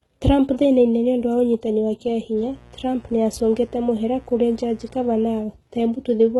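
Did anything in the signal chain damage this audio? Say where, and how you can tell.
Yes. Throughout, the sound is capped at 11.8 kHz, with gritty, lispy s sounds. This is likely HE-AAC compression at a very low bitrate: a spectrogram shows a hard ceiling and smeared, copied-up treble.

Mains buzz enters at the analogue wiring from 2.33 to 5.46 s, right after "niũndũ wa ũnyitani wa", about 25 dB below the signal. A spectrogram shows a 60 Hz harmonic comb, and the waveform shows spikes 120 times per second.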